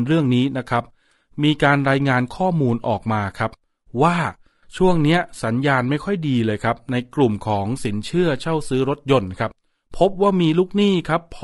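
Throughout, the speech has likely passed through low-delay AAC compression, the AAC-ELD codec of video calls, at a rate pointing to about 32 kbps. Its short frames blur pitch harmonics, leaving the voice plainly rough and grainy, with noise between the harmonics.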